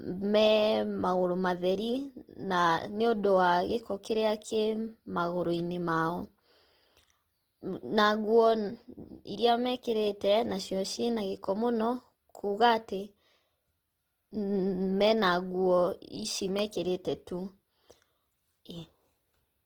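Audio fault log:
Throughout: Opus compression. The speech sounds grainy and rough, with a noisy, sandy texture and a hiss-like fill where detail should be, yet the top end stays open, reaching to about 20.1 kHz with no muffling. This is likely Opus in its music-oriented CELT mode, which preserves each band's energy but, short of bits, fills bands with folded or noise-like content; the plainly audible damage fits a low rate around 16 kbps.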